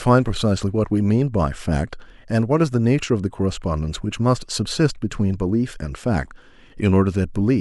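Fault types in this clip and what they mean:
No faults can be heard.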